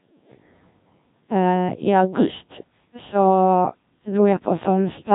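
Throughout, the speech carries Codec 2 vocoder damage: rebuilt from pitch and envelope as sine waves, it sounds robotic and buzzy, empty above 3.8 kHz, fitting roughly 1.3 kbit/s.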